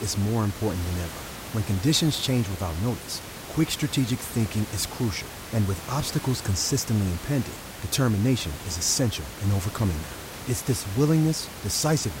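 No system faults are audible in this speech, and the only thing under it is the room's own background noise, sitting about 13 dB below the speech as part of the recording.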